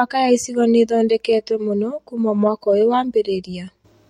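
At about 3.25 s, right after "mũno kuma mwaka ũyũ", there's a repeated frames glitch: an 8.7 ms chunk replays once, giving a tiny stutter and lengthening the speech slightly.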